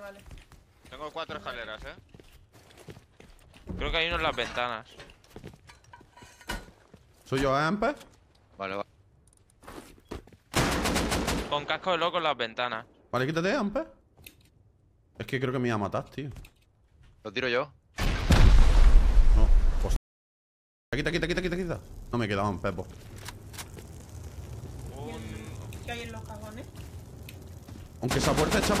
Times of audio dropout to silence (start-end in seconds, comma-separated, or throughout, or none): 19.96-20.93